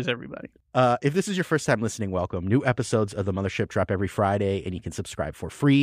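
From 0.42 s to 0.60 s there is a sudden gain jump: the speech and its background noise both step up by about 8 dB at once, with no fade. The likely cause is a digital gain setting applied between adjacent samples without a ramp.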